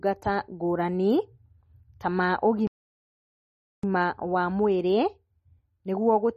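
From the start, the speech carries MP3 compression damage that is plainly audible. Nothing is present above 12.9 kHz, where the encoder has cut the treble at a fixed point. Weak frequency components drop in and out from frame to frame, giving the voice a watery, swirling texture with metallic chirps on s sounds and softened attacks. This is likely from encoding at a very low bitrate, which fits something near 32 kbps.

At 2.67 s, just after "ta ma", a playback stall cuts the speech off mid-flow. The output stays silent for about 1.16 s and the voice resumes at 3.83 s. A gap like this most likely comes from the player running out of data, or from its thread being blocked, so that nothing reached the output until it recovered.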